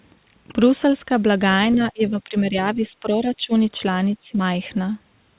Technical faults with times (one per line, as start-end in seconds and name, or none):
1.75-3.52 speech suppressed in double talk
4.22-4.39 speech suppressed in double talk